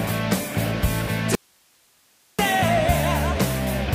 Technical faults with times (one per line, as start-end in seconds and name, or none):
1.35-2.39 audio dropout to a faint residue